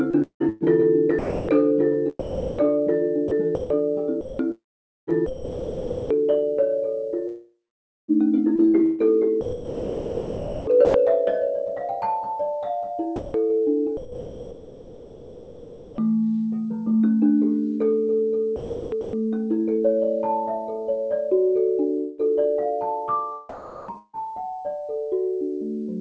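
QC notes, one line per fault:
0.11–6.10 s, 7.27–10.94 s, 13.16–15.98 s, 18.56–19.13 s, sound chopped by the voice detector: choppy edges, quiet parts replaced by comfort noise, roughly 2.8, 2.4, 2.2 and 0.5 s replaced; likely detector toggling transmission.
21.98–22.21 s and 23.98–24.16 s, long network dropout: a fading buzz fills the gaps (about 0.21 s and 0.15 s lost, the second ending in 50 ms silence); likely missing packets.
23.49–24.16 s, comfort noise in place of the background: real background swapped for flat, featureless noise for about 0.54 s, likely discontinuous transmission during a pause.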